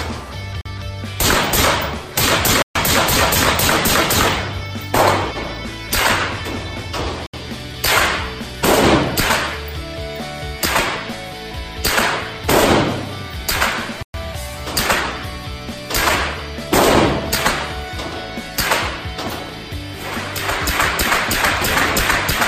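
At 0.61 s and 2.62 s the sound drops to silence for 43 ms and 133 ms, then resumes. This is a Bluetooth stall, likely from packets held up by radio interference, which left the headphone buffer empty until the resent data arrived. From 4.6 s to 22.2 s, clock drift buffer slips set in. Two devices running on separate clocks, likely about 40 ppm apart, let the buffer creep until a few samples are dropped or repeated. That produces a click roughly every 4.36 s, about five in all. Further stalls interrupt the sound at 7.27 s for 71 ms and at 14.03 s for 116 ms.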